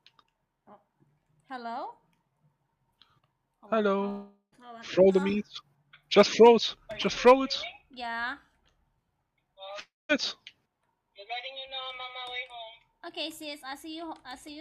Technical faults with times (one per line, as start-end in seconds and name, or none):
4.09-4.63 long network dropout
9.80-10.12 long network dropout